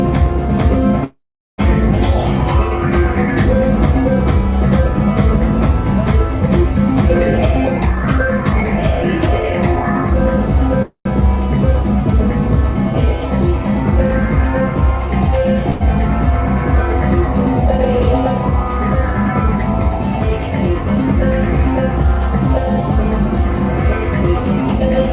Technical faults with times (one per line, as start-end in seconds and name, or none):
1.04-1.61 call audio freeze
7.70-10.04 jitter buffer speed-up
10.82-11.08 call audio freeze
15.70-15.83 call audio freeze